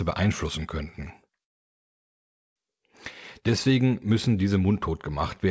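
Right after "beeinflussen könnten", at 1.44 s, the audio stops dead and stays silent until 2.58 s, a call audio freeze of about 1.1 s. The likely cause is packets held up in transit, leaving the jitter buffer empty, and with a wait this long the receiver fell quiet. When the audio resumes it carries on from where it stopped, with nothing lost, just delayed. On a waveform this is a flat line; on a spectrogram it is a blank vertical band cutting across the content, which elsewhere ends at 8 kHz.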